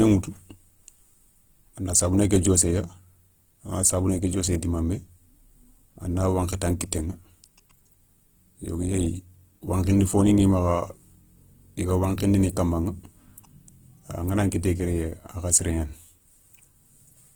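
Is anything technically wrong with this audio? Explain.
Yes, the whole speech clip carries plainly audible Opus compression, likely at a starved rate, perhaps around 16 kbps, with band energies kept but filled coarsely, so tones sound grainy, rough and noisy.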